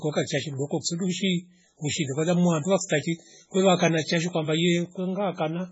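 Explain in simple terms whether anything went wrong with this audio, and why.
Yes: from start to finish the speech sounds watery and swirly, with nothing above 7.7 kHz, likely from heavy MP3 compression. Unlike simple muffling, the faint parts flicker in and out.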